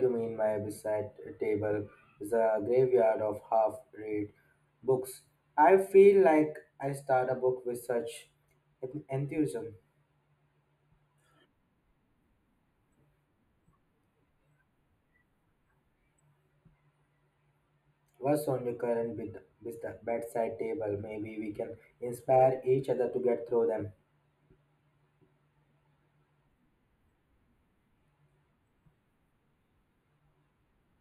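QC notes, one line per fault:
throughout: channel delay (comb filtering). One channel lags by roughly 0.1 ms; summed to mono, it cancels around 5 kHz, leaving the speech dull and hollow.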